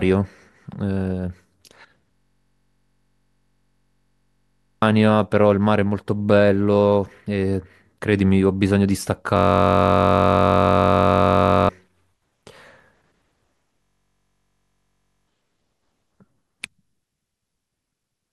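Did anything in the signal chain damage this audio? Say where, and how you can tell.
Yes. It's a system hang loop at the driver/buffer stage, three times: 2.13–4.82 s, 9.37–11.69 s and 13.82–15.28 s. Each time the speech gives way to a steady buzz at about 46.9 Hz, a single 21.33 ms slice played over and over, which fits a 1024-sample buffer. The host stalled while the hardware kept cycling that ring buffer, so roughly three, two and one and a half seconds of real audio never made it through.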